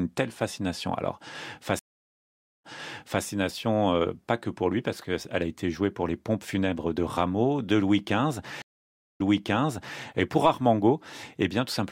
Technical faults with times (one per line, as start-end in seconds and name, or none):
1.79-3.24 stream reconnect
8.62-10.01 stream reconnect